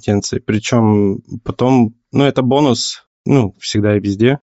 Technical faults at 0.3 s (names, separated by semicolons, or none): Bluetooth LC3 compression